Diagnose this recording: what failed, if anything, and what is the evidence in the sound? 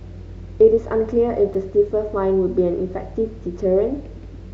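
Driver or buffer stage. At 1.54 s the speech drops to dead digital silence for about 5.3 ms and snaps back with no fade, so you get a tick. That's a block of digital silence, the output buffer running dry, which fits a 256-sample buffer.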